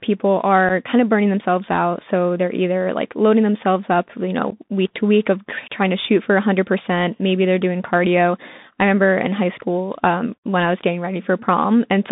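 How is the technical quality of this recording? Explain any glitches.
The recording is narrowband speech with clearly audible codec damage, plus two short dropouts.

The Bluetooth CVSD headset codec shapes the whole clip. Sound is confined to roughly 150 Hz to 3.7 kHz. The coder sends one bit per sample, up or down, with an adapting step. This fits a 64 kbit/s link. Loud high sounds outrun the step and distort. S sounds turn scratchy, and a granular hiss sits under the speech.

There are two instances of unconcealed Bluetooth headset packet loss. At 0.69 s, just before "kind of burning themselves", about 7.5 ms of audio drops out, roughly one voice packet. From 4.50 to 4.53 s, between "loading themselves up you" and "week to week of", about 15 ms is lost, roughly two packets. Silence or an idle pattern replaced the missing packets. Each leaves a short hole with abrupt edges, and the speech returns briefly quieter.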